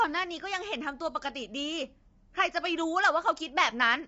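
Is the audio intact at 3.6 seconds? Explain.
No. At 3.6 seconds, as throughout the speech, the sound is rough and grainy, with noise between the harmonics and nothing above 7.7 kHz. The likely cause is low-delay AAC compression at a low bitrate, around 24 kbps, whose short frames resolve pitch harmonics poorly.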